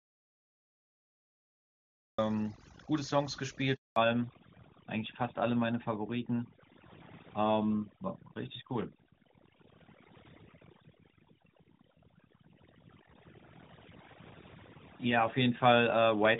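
Right from the first instant the audio is already in an audio dropout to silence, and it stays that way until 2.18 s. It's plain silence, not quiet room tone, so whatever was there is simply gone. The likely cause is the input being lost, through something like a disconnected device, a failed link or an accidental mute, while the recorder kept writing silence. When the sound arrives at 2.18 s it comes in abruptly, mid-flow, rather than fading up.

Running underneath the whole clip is overdone noise removal. The denoiser was pushed so hard that individual frequency bands near its noise estimate get pulled right down or switched off, and the quieter parts of the speech get caught along with them. You hear it as a background that's almost silent but sprinkled with little twinkling artefacts.

At 3.74 s there's a handover gap lasting 220 ms, through to 3.96 s. The call was being passed from one network to another and no speech frames made it across during the switch. 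The voice collapses within a few tens of milliseconds and sits in silence until the new link picks up, so that slice of speech is lost.

From 3.96 s to the end there's a fallback to narrowband. Up to that handover the call runs on AMR-WB at 23.85 kbit/s, with a brighter top end. After it, the call drops to AMR-NB at 12.2 kbit/s, and everything above 4 kHz disappears. The sibilants lose their edge and the voice turns duller and a bit rougher for the remaining twelve seconds or so.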